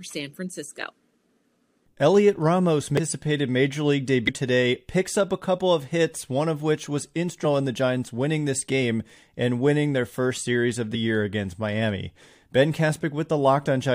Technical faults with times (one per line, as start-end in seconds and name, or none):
2.97 damaged data in a compressed stream
4.27 damaged data in a compressed stream
7.43 damaged data in a compressed stream
10.94 damaged data in a compressed stream